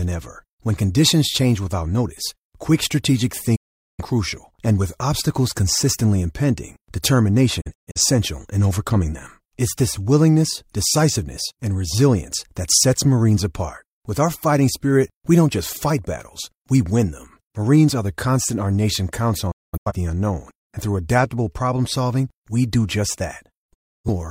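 Digital broadcast dropouts hit four times, with the receiver muting on bad frames via quick 8 ms fades: 3.56–4.04 s, between "without notice quick strategic" and "and with obstacles consistently"; 7.61–8.00 s as scattered holes before "in overcoming them"; 19.51–19.92 s, after "constant our nation counts"; and 23.74–24.09 s. Whatever was said in those gaps is gone.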